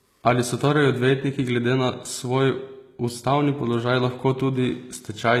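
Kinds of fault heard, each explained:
Low-bitrate audio saved at a high bitrate: throughout the speech, the smeared, thin detail of heavy compression remains, likely from an HE-AAC encode near 20 kbit/s later re-saved as high-rate MP3, which fits 320 kbit/s; re-encoding cannot restore what was discarded.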